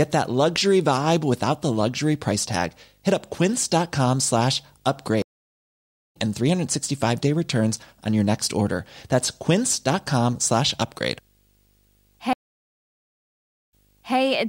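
It's a speech clip with a video or display buzz running under it the whole way: a 50 Hz field-rate buzz with hash on top and a thin 15.6 kHz line tone, sitting roughly 40 dB below the speech. That's a screen or video cable coupling into the audio path. There are also two stream reconnects. At 5.22 s the audio drops out for 0.89 s, and when it returns at 6.17 s it has jumped ahead by roughly a second. At 12.33 s it goes silent for 1.36 s, then resumes around 14.17 s about 0.48 s earlier than where it broke off, so a bit of speech repeats.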